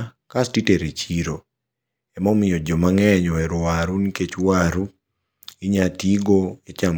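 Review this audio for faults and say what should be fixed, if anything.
Nothing in the audio needs to be fixed, as no faults can be heard.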